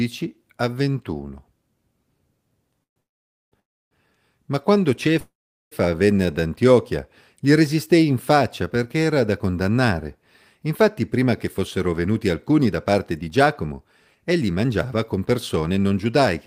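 A call audio freeze interrupts the speech four times: 2.83 to 2.98 s, 3.00 to 3.54 s, 3.60 to 3.93 s, and 5.20 to 5.73 s. Each pause lasts from about 0.15 to 0.54 s and is mostly silent. The likely cause is packets held up in transit until the jitter buffer ran dry. Unlike a dropout, nothing is lost. The speech picks up exactly where it stopped, so the pauses only add delay.

From 11.02 s to 16.27 s, a jitter buffer speed-up makes the speech run about 8% fast. The receiver trimmed many pitch-period-sized slices, roughly half a second in total, to drain the excess buffered audio. Because the pitch stays unchanged, this sounds like hurried delivery rather than a tape-style speed change, which would also raise the pitch.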